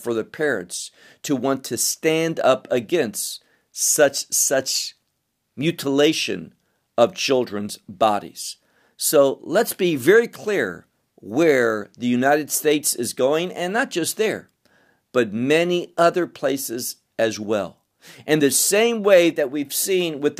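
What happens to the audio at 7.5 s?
Nothing goes wrong at 7.5 s; the speech there is intact, with no dropout, click, distortion or other fault.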